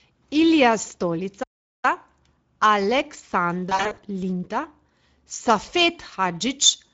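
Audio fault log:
throughout: Speex codec. The audio is plainly degraded in the way a CELP speech coder at a middling setting degrades it, which fits a rate near 17 kbps. With few bits for the excitation, the speech turns hoarse and grainy. On a spectrogram, harmonics look smeared and broken, and the region above 4 kHz shows diffuse noise-like texture instead of defined structure. The waveform keeps its overall envelope but loses fine detail.
1.43–1.85 s: playback stall. The speech cuts off in mid-flow and the output goes silent for about 0.4 s before resuming. This is likely the player running short of data or having its thread blocked. On the waveform this is a flat, silent gap with abrupt edges on both sides. On a spectrogram it appears as a clean vertical band of empty time across all frequencies.
3.69–3.99 s: VoIP packet loss concealed by the speech codec. About 180 ms of audio is missing, scattered across a 280 ms stretch, with the longest continuous loss around 40 ms. 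That pattern fits roughly nine 20 ms frames. The decoder fills each hole by extending its last pitch and filter at falling gain. The result sounds stretched and weakened, and the sound stays thin briefly after good packets return. A spectrogram shows repeated flat, stretched harmonics and fading noisy patches, and the waveform shows dips in level.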